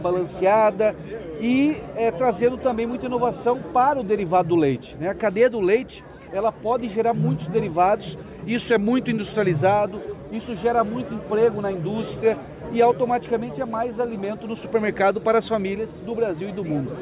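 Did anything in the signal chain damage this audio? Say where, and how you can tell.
No, nothing along the chain seems to have harmed this one, so there's no stage to point at and nothing to explain.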